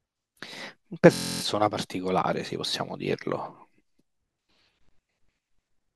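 At about 1.14 s the speech freezes into a system hang loop that lasts until roughly 1.42 s. The machine or its driver stalled, but the audio hardware kept replaying the same 23.2 ms slice of its ring buffer, which fits a 1024-sample buffer. That slice repeats about 12 times at 43.1 Hz, so you hear a flat, rough buzz in place of the speech. Once it clears, the speech picks up with essentially nothing missing.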